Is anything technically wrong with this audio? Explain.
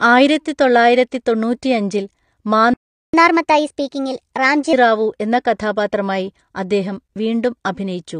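Yes, there are three faults.

Throughout the clip, the speech carries plainly audible codec damage, likely from AAC compression, consistent with AAC-LC at about 32 kbps. The encoder quantised its frequency lines coarsely and removed everything above 9.7 kHz, so the sound is dull and smeared. A spectrogram shows a hard, flat ceiling at 9.7 kHz.

From 2.74 to 3.14 s, the speech cuts out for about 0.4 s. This is likely a playback stall: the player ran short of data or was blocked, and output silence until it recovered. The waveform shows a flat gap mid-phrase, and the spectrogram shows a blank vertical band.

From 3.14 to 4.73 s, there is catch-up at higher speed. The player drains its backlog by resampling at 1.25 times normal speed, so the speech sounds rushed and roughly four semitones higher before returning to normal. A spectrogram shows the harmonics shifted upward and events packed closer together.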